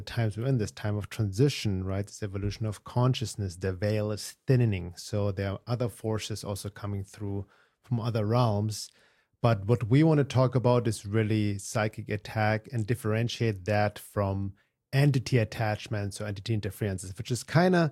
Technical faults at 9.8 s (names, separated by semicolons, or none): none